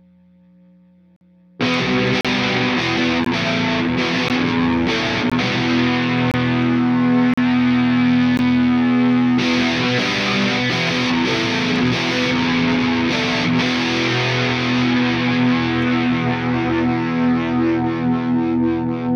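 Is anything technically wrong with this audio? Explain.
Yes. Short, hard-edged holes of silence cut into the sound at 1.16–1.21, 2.21–2.25, 3.25, 4.28, 5.30, 6.31–6.34, 7.34–7.38 and 8.37 s, about once a second and 15 to 48 ms long. These are gaps between stream segments. The timestamps of consecutive 1-second segments leave small spaces that the player fills with silence, so no audio is lost; it is only pushed later.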